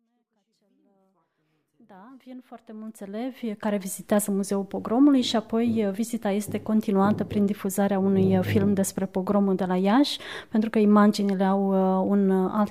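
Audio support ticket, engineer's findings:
Nothing stood out on listening; the smooth fade-in from the opening to about 4.1 s rises evenly with no click or hard edge.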